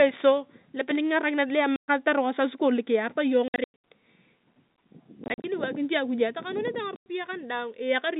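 Packet loss filled with silence cuts the speech at 1.76–1.88 s, 3.48–3.73 s, 5.24–5.44 s and 6.96–7.06 s. Missing packets were replaced with dead silence, leaving hard-edged holes whose lengths fit 20 ms packets. The middle two are clusters of short dropouts rather than single gaps.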